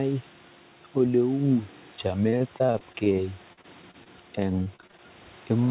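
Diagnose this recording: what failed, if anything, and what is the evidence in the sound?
Repeated packet loss (robotic sound) at the network stage, in three bursts: 2.30–3.13 s, 3.53–4.08 s and 4.64–5.01 s. Packets kept arriving lost or late, and each hole was bridged by extending the preceding sound. The result is a choppy texture with brief dropouts, up to 42 ms in the middle burst. Concealment covers roughly a fifth, a quarter and a third of each burst in turn, within narrowband audio that stops at 4 kHz, consistent with G.711 mu-law.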